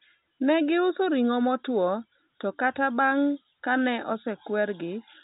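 No faults present; the speech runs over ordinary G.711 telephone coding, A-law at 64 kbps, with its usual band edge near 3.8 kHz and no more than a faint trace of coding grain riding on the signal.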